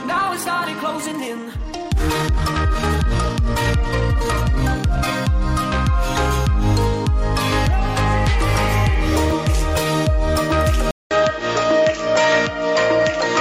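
From the start to 5.12 s the pace is running 1.64 times faster than it should, yet the pitch doesn't rise with it. That's a time-stretched section, most likely software squeezing the audio to fit a length by dropping short slices and stitching what's left together. It comes across as rushed, and then the pace snaps back to normal after 5.12 s.

At 10.91 s there's a gap of about 200 ms, and when the sound returns it's duller and boxier. That fits the input switching to a poorer device, likely another microphone or a headset call profile taking over. The band is narrower from there to the end. The level stays about the same, but a new background noise floor comes in, sitting roughly 30 dB under the signal.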